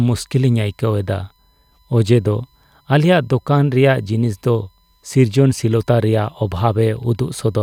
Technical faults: USB whine

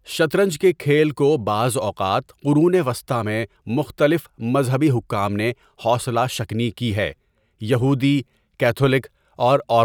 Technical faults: none

